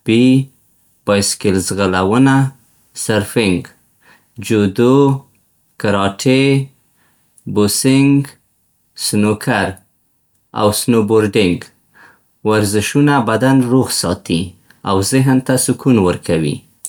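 No technical faults are audible anywhere in the speech recording.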